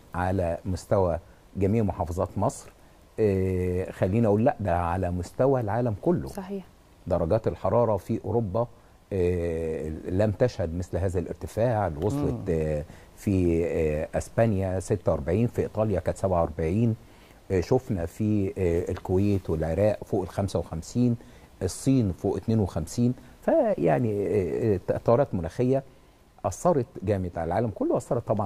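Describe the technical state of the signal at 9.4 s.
At 9.4 s the signal is intact, with no audible technical fault at that moment.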